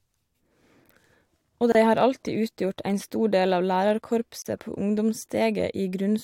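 A speech clip with two gaps at joins of encoded pieces: silences of about 28 ms at 1.72 s and 36 ms at 4.42 s. Unlike a dropout, nothing is lost. Encoder start delay and end padding were left in, so the speech pauses and resumes exactly where it stopped.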